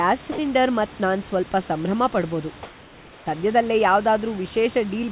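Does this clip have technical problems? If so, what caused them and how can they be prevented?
Yes. At 0.32 to 0.38 s there is sound dropped by the voice detector: the sending side's voice activity detector likely misjudged a quiet stretch of speech as background and stopped transmitting, so the receiver substituted synthetic comfort noise. For about 60 ms the real sound is replaced by a steady, featureless hiss, a brief hole before transmission resumes. Lowering the detector's sensitivity threshold or adding a longer hangover time would keep quiet speech from being cut.

From 2.63 to 3.26 s there is comfort noise in place of the background: the sender likely switched to discontinuous transmission during a pause, and the receiver filled those 630 ms with generated noise shaped roughly like the room. The room noise, which sits about 25 dB below the loudest parts, is swapped for a smooth, detail-less texture about 1 dB quieter, a subtle change in character that lasts until the sound returns. 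This is heard through a G.711 call path with nothing above 4 kHz. Disabling discontinuous transmission, or using a better comfort-noise model, would keep the real background continuous.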